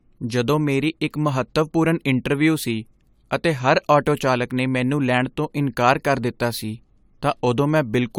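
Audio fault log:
throughout, generation loss: the speech sounds swirly, smeared and hollow, with blurred attacks, likely from around three successive AAC-LC encodes that each requantise on a shifted frame grid, stacking noise and spectral holes. The sound fits about 96 kbit/s, with nothing above 20 kHz.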